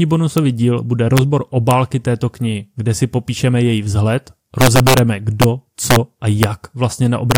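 Speech clip with integer overflow: loud peaks wrap to the opposite sign instead of limiting, giving harsh cracks at 0.38, 1.17, 1.71, 4.61–4.99, 5.42–5.44, 5.91–5.96, 6.43 and 7.31–7.36 s, worst where overdrive reaches about 5 dB.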